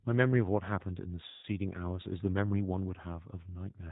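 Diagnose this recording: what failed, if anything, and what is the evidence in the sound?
Codec stage: the speech is band-limited to 4 kHz and audibly rough and synthetic throughout, the sound of G.729 at 8 kbit/s rebuilding the speech from a vocal tract filter and sparse pulses.

Network stage: from 1.28 to 1.45 s there's VoIP packet loss concealed by the speech codec. About 150 ms of audio goes missing, which points to a short burst of lost packets. The decoder stretches the last sound into a fading buzz or coloured noise and is slow to recover afterwards.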